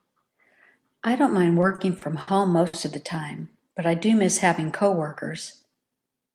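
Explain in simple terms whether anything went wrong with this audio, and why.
Three things went wrong, all caused by network packets not arriving on a steady schedule.

Repeated stalls (stutter), 1.61 to 2.29 s: packets kept arriving late, so the receiver's waiting area for incoming audio, the jitter buffer, ran dry five times. Each time, the receiver bridged the silence by continuing the last bit of sound, for 140 ms in total, with the longest wait at 60 ms. About a fifth of that stretch is filler, so the speech drags and stutters, though nothing is actually lost.

Short stall from a late packet, 2.67 to 2.75 s: one packet simply wasn't there when it was needed, and the buffer emptied again. The receiver held the last sound for 60 ms until the packet showed up, then carried on exactly where it left off. You hear a sound held a little too long, sometimes with a faint buzz or dip, but no speech is missing.

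Jitter buffer speed-up, 6.12 to 6.34 s: by now more audio was waiting than the receiver wanted. To catch up, it snipped out many tiny slices, roughly 40 ms altogether. That part plays at 113% speed while keeping the same pitch, so the speech sounds briefly rushed rather than squeaky.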